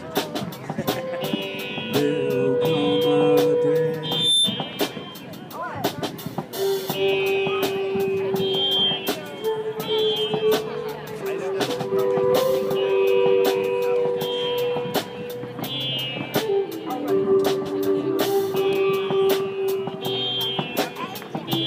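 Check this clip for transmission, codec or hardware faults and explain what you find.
One fault stands out, a loudspeaker feedback squeal from 4.03 to 4.55 s. A microphone-to-speaker loop exceeds unity gain at 3.6 kHz, so that tone swells over about a third of a second to several dB above the sound. Steady interference whistles don't build up like this.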